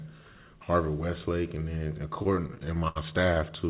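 From 2.16 s to 2.98 s the speech suffers repeated stalls (stutter). Packets kept reaching the receiver late, so its jitter buffer drained a dozen times in under a second. At each gap the receiver extended the last bit of sound until fresh audio arrived. Those fills add up to about 213 ms, roughly a quarter of the span, and the longest runs 74 ms, long enough to fade. Nothing is skipped, but the speech drags and hiccups, with syllables held and then resumed.

At 3.34 to 3.38 s comes a short stall from a late packet. A single packet missed its playout time, the buffer ran dry, and the receiver stretched the preceding sound by 24 ms before carrying on from the same point. The result is one briefly held sound with a faint buzzy or dipping quality. Throughout, the call path leaves nothing above 4 kHz, which fits a narrowband G.711 telephone codec.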